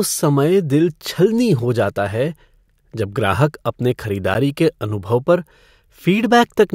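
A block of digital silence at 4.34 s, between "जब ग्राहक अपने" and "के अनुभव पर", briefly cuts the speech. For about 10 ms the sound drops out, the kind of gap left when the output buffer isn't filled in time. The signal stops and restarts abruptly with no fade. With a hole this short, it is heard as a tick or dip rather than an audible gap.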